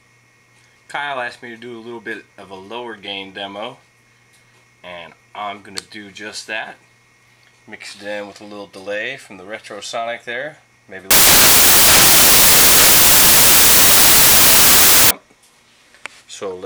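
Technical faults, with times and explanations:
11.11–15.11 s: samples built from the wrong bytes. For 4 seconds the sample bytes are misassembled, so the rapidly changing low bits dominate, producing loud, harsh broadband noise.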